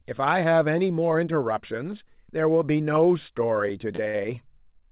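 From 3.54 to 4.16 s the speech drags and catches in four brief hitches, the longest about 56 ms, where a sound is held on instead of moving forward. These are repeated stalls (stutter): packets reached the receiver late, so its jitter buffer kept running dry and it stretched the last sound to cover each wait, roughly 96 ms in all. Nothing is lost, but the flow stumbles. The band stops at 4 kHz, as expected of the G.711 A-law call path.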